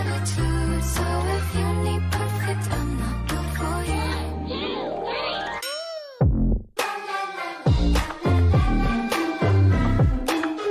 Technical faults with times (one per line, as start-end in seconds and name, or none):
none